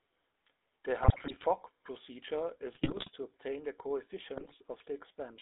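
From the start, the speech carries the gritty, buzzy texture of the GSM full-rate codec, consistent with its 13 kbps coding. On a spectrogram, energy sits between about 300 Hz and 3.7 kHz, with nothing above. The harmonics look smeared and grainy rather than clean striations, because the codec rebuilds the voice from a vocal-tract filter fed by a coarse, regularly spaced pulse excitation. This gravelly roughness is plainly audible throughout.

GSM bit errors break up the speech three times: from 1.02 to 1.45 s, from 2.72 to 3.11 s (just before "to obtain the"), and from 4.36 to 4.53 s. Corrupted filter, pitch and gain values make the decoder warp the spectrum and misjudge the level frame by frame, so the voice squawks, pops and gargles. On the waveform, each burst shows jagged spikes and uneven level jumps. On the spectrogram, it shows blotchy, distorted bands.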